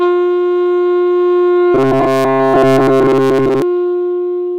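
Robotic sound from repeated short buffers runs from 1.75 s to 3.62 s. For almost two seconds the audio loses its natural texture and becomes a rigid, metallic buzz at about 133 Hz, a pitch that matches a fragment of roughly 7.5 ms played over and over. The likely cause is new audio arriving too slowly, so playback kept looping that last short slice while the real material was skipped. Practically the whole stretch is made of these repeats.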